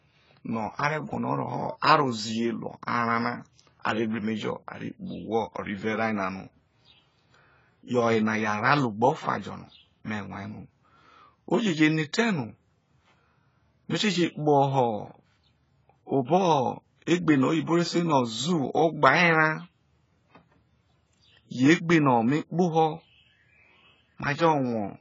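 Speech encoded by AAC compression, likely AAC-LC at a starved bitrate that sounds like roughly 16 kbps, loses everything above 7.6 kHz throughout. The heavy quantisation leaves the voice dull and smeared, with a warbling, fizzy texture on sustained sounds and sibilants.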